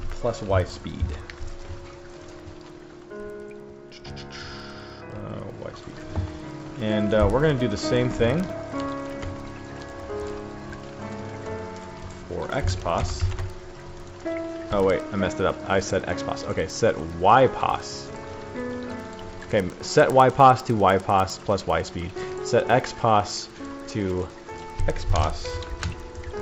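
Throughout, the resampler restarted on every block. Each 100 ms block was converted from 16 kHz to 48 kHz alone. Edge errors give steady ticks at 10 Hz.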